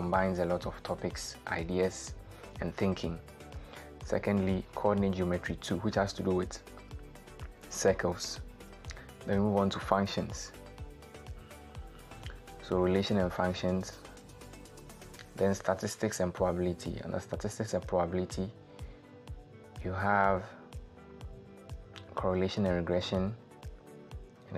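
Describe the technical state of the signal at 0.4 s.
At 0.4 s the signal is intact, with no audible fault at that moment.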